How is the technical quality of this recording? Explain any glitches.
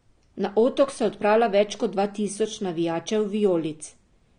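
The speech is audibly degraded by lossy compression for its whole length. AAC compression: likely AAC-LC at a low bitrate, fitting about 32 kbps, discards high bands above 9.7 kHz and coarsely quantises the rest, leaving speech dull, smeared and warbling.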